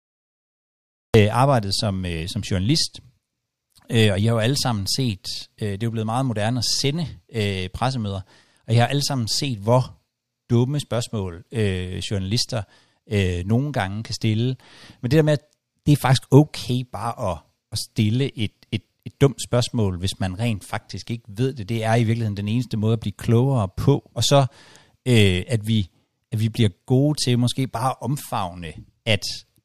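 Cut-off start at 1.14 s in this speech clip: digital silence gives way to speech mid-sound, with no natural attack, because recording began late.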